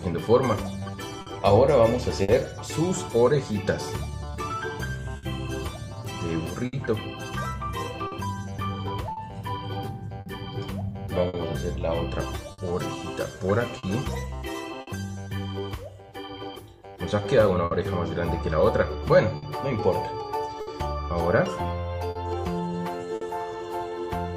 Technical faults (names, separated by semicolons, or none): clock drift between sender and receiver; repeated timing corrections; short stall from a late packet; scattered short gaps